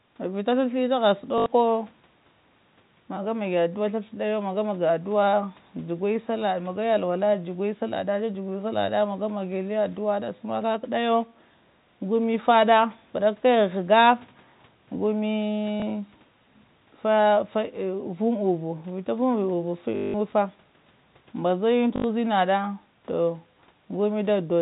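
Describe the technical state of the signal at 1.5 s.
Packet loss with the last packet repeated runs from 1.38 to 1.46 s. The receiver replays one fragment for 80 ms, so it buzzes like a robotic stutter.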